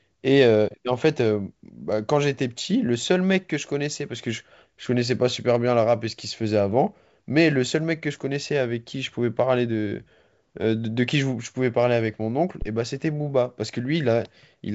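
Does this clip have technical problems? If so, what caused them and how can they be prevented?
Yes, there's a phantom power thump from about 12.62 to 12.69 s. Someone switched phantom power, or some other supply, on a live input, and that sudden DC step pushed through the coupling capacitors as a deep low thud. It dies away quickly, in about 15 ms, so it's a short knock rather than a long boom. The speech around it comes through a G.722 wideband path, topping out near 7 kHz with little or no coding damage. To prevent it, mute or pull down the channel before toggling phantom power and wait a moment before bringing it back up.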